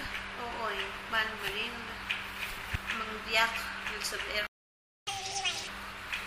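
At 4.47 s the sound cuts out to silence for about 600 ms until 5.07 s, a playback stall, likely from the player running short of data or being blocked. From 5.07 s to 5.67 s the audio rushes at twice normal speed with pitch raised about ten semitones, a catch-up at higher speed where the backlog is resampled to recover lost time.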